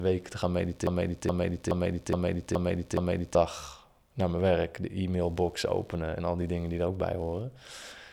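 Throughout the clip, computer activity noise sits faint beneath the speech, roughly 40 dB down: a buzzing, chirping texture pulsing around 70 Hz. Unlike steady mains hum, it shifts with the machine's load, which disturbs the audio circuit's shared ground, and not with the talking.

Right after "te gaan", at 0.87 s, a broken-record loop begins. The same 0.42 s fragment repeats exactly, six times back to back, until 3.35 s, and the speech meant for that span is lost. A stalled player or stream likely resent its last fragment. The identical repeats distinguish it from a stutter or dropout.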